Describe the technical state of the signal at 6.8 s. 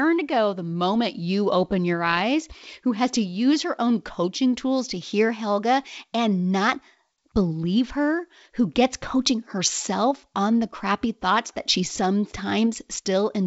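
At 6.79 s, between "and not" and "believe her who gets", there is a brief pop from bit errors on an ADPCM link. A few flipped bits in the G.722 stream upset the decoder's step size and predictor. The disturbance rings on for milliseconds as a rough burst with a quick level jump.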